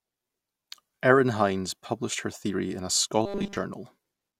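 In this speech clip, audio likely arrived too slowly from 3.26 to 3.57 s, so the playback side repeated a short buffer of about 5 ms across that entire stretch. The result is robotic sound from repeated short buffers: a rigid, metallic 200 Hz buzz that follows the voice only roughly.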